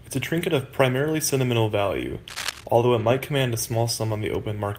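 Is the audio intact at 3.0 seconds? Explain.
No, there's a lost packet rebuilt from error correction at 2.99 to 3.05 s, right after "sentimental value although it": about 40 ms played from low-bitrate backup copies, so no gap, just briefly rougher, noisier speech.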